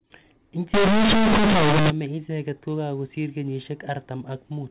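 From 0.74 s to 1.90 s, just before "icheket kokakosir", the speech turns into harsh, buzzy distortion with loud noise filling the gaps: companded audio read as linear. The mu-law telephone bytes are played as plain 8-bit samples with no expansion, so every sign change throws the output across about half its range and quiet sounds come out as large as loud ones. Unlike ordinary clipping, quiet passages and pauses are hit just as hard as peaks.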